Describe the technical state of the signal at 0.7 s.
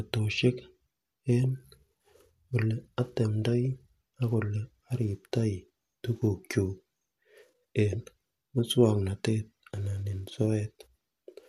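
At 0.7 s the speech signal is intact, with no audible fault at that moment.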